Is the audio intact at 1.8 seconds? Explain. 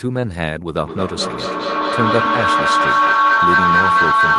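No. At 1.8 seconds the audio is inside a feedback howl that starts at 0.84 s and continues to the end of the clip. Sound from a loudspeaker is re-entering a microphone on the same call, gaining level each pass, so the loop locks onto a tone around 1 kHz. The sound circulates through the loop roughly every fifth of a second, and at its loudest the tone rises to about 7 dB above the speech.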